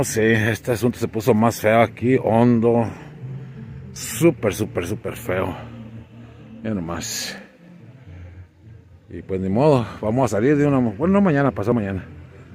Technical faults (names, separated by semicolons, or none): dropped buffer (overrun)